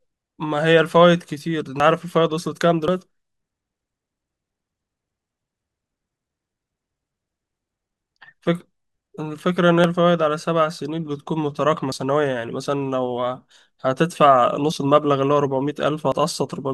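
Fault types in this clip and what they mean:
Dropped buffer (overrun): six jumps where the speech skips ahead with no gap. The first loses around a tenth of a second and the rest roughly 40 ms each, likely because the hardware overwrote samples before the program collected them.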